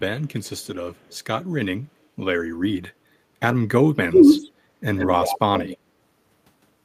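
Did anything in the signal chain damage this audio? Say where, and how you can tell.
Yes. At the call-processing stage, the echo canceller was likely overwhelmed by both sides talking at once and turned the near talker down. The result is speech suppressed in double talk: from 4.07 to 4.41 s the voice sinks deeply, for roughly 300 ms.

Also in call processing, the far end's echo canceller likely failed to remove all of the loudspeaker pickup. This echo leak returns a copy delayed by 117 ms at 4.17–4.49 s (faint), then 4.95–5.39 s and 5.55–5.77 s (noticeably stronger).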